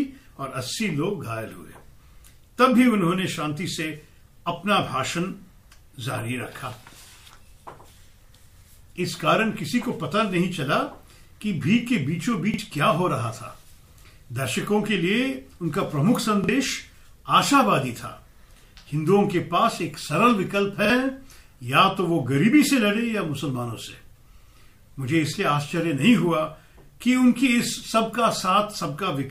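A brief stutter, with the same 46 ms fragment sounding twice over a hard join, occurs at 12.54, 16.44 and 20.85 s. Each is a repeated buffer: fresh audio arrived late, so the device replayed its last block, which fits a 2048-sample buffer, and roughly 50 ms of sound goes missing.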